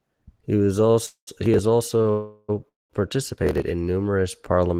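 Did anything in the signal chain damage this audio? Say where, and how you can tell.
Yes. The damage is in the network stage, at the receiver's jitter buffer.

Short stalls from a late packet occur at 0.91–0.96 s and 2.02–2.07 s. In each, the sound just before is held for roughly 26 to 27 ms with a faint buzzy smear, and the second stall carries about 9 ms of extra stretch. The audio then resumes from exactly where it left off, so nothing is lost, but playback slips later by that amount. This is the receiver stretching the last sound while it waits for a packet that arrived after its due time.

Call audio freezes occur at 1.06–1.29 s, 2.11–2.51 s and 2.68–2.92 s. In each, the last sound continues as a fading buzz. At 1.06 s it decays into about 110 ms of silence. At 2.11 s the held buzz lasts the whole 380 ms or so without going quiet. At 2.68 s nearly all of the 210 ms gap is silent. The audio always picks up where it stopped, so time is inserted and nothing is removed. 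The likely cause is packets delayed in transit, which left the jitter buffer empty until they arrived.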